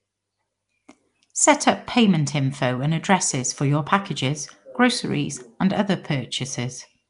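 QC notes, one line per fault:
Throughout: Nellymoser compression, rough hissy halo and smeared underwater speech, nothing above 10.6 kHz; likely Nellymoser Asao coding, noise-filling weak bands starved of bits.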